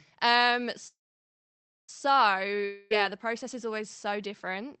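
From 0.87 to 1.90 s the sound trails off into a short fading buzz and then about 0.95 s of silence before resuming where it stopped. This is a call audio freeze, likely from packets held in transit emptying the jitter buffer.

At 2.65 to 2.92 s a fading buzz replaces about 0.26 s of sound, which never returns. This is a long network dropout, likely lost packets.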